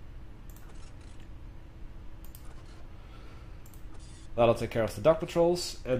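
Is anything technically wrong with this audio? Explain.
No, nothing technically wrong can be heard in this audio. There is no audible defect to point to or explain.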